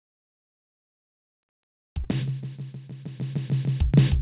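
At 2.04–2.07 s, short concealed packet loss: about 20 ms of this band-limited music arrived too late, and the receiver extrapolated it, leaving a brief smeared wobble.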